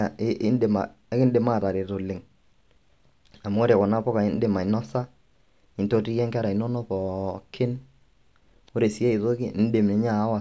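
No dropouts, clicks, distortion or other technical faults can be heard anywhere in the speech.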